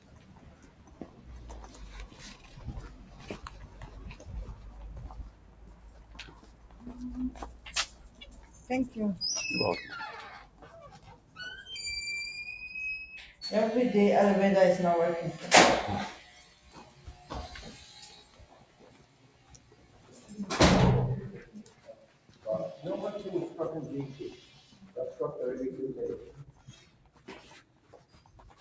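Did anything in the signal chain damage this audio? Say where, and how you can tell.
Yes. A noise suppressor meant for speech, left on in the call processing, is working on these sounds and swings their gain by about 15 dB. Attacks pass while sustained tails sink, which sets it apart from compressor pumping.

The noise suppressor cuts sound at 0.0–3.15, 5.3–8.69, 10.47–11.36, 16.43–17.28, 18.19–20.3, 21.46–22.45, 24.4–24.96 and 26.49–28.6 s. Steady content fades down by about 7–8 dB rather than vanishing abruptly, as it would in a dropout.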